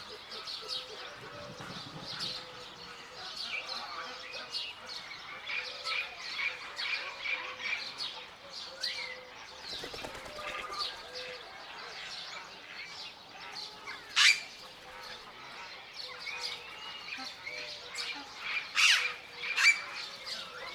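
Nothing stood out as a technical fault on listening to this recording of everyday sounds.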